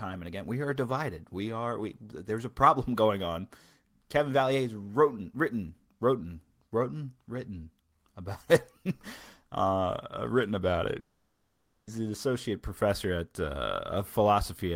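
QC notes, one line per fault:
10.99–11.90 s, long network dropout: packets likely stopped arriving for about 0.88 s, so that stretch of speech is simply lost. The receiver stretches the last sound into a brief fading buzz, leaving about 0.82 s of silence before speech resumes past the gap.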